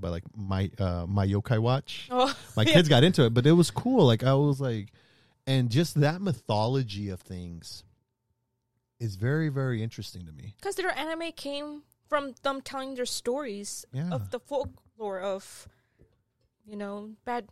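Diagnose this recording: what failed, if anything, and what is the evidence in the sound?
At 4.53 s the speech drops about 6 dB and stays there to the end: one channel drops out, likely a loose stereo cable, so the mono sum loses half.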